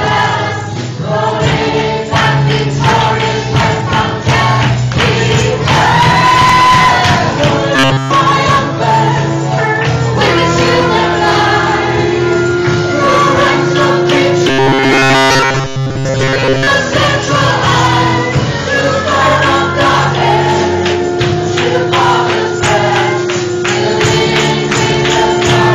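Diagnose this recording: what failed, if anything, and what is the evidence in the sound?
Robotic sound from repeated short buffers, 7.76–8.11 s and 14.48–16.67 s: a rigid 134 Hz buzz, likely the buffer stage looping 7.5 ms chunks.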